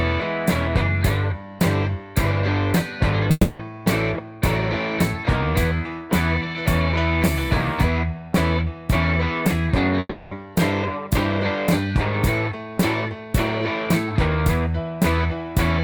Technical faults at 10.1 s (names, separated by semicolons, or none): long network dropout